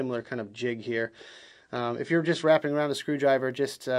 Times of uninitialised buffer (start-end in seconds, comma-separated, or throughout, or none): none